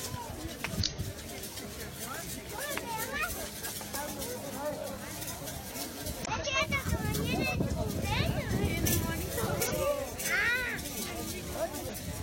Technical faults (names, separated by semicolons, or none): damaged data in a compressed stream